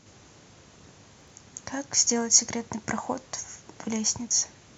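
From 1.21 to 1.30 s, chunks play out of order: one block of about 23 ms arrives three chunks late. The result is a brief jumbled stutter at the hard joins, not the silent gap of a dropout, since no audio is lost.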